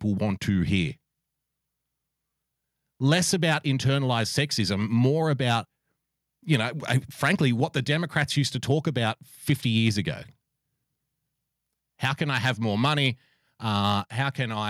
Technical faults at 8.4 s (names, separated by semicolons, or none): microphone overload